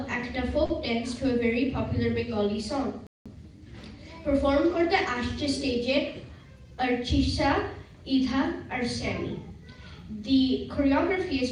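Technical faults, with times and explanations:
0.65–0.71 s, short stall from a late packet: about 40 ms of the preceding sound is stretched with nothing lost; the waveform shows a repeated, held segment.
3.07–3.26 s, playback stall: the audio drops out for about 189 ms, likely because the player ran out of data; it appears as a flat waveform gap and a blank spectrogram column.
6.64–7.19 s, jitter buffer speed-up: the sound runs about 7% faster at unchanged pitch as some 40 ms is trimmed in small slices; the spectrogram shows compressed timing with steady harmonics.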